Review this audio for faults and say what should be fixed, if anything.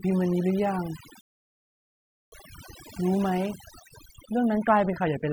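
Overdone noise removal runs through the whole speech clip. The noise reduction was set too strong. It pulls individual frequency bands far down whenever they sit near its noise estimate. Quiet parts of the voice vanish with them. The background drops and breaks up into twinkling specks. Fix it by lowering the reduction amount and reprocessing from the unprocessed recording.

A rebuffering stall cuts the sound to silence from 1.21 s to 2.32 s. The player ran out of downloaded audio and waited for more. Playback then resumes exactly where it stopped. Nothing is lost, but about 1.1 s of dead air is added. A larger playback buffer or a lower streaming bitrate would prevent this.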